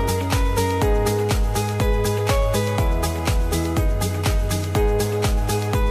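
No technical faults can be heard anywhere in the clip. Nothing in it calls for a timestamp or any further comment.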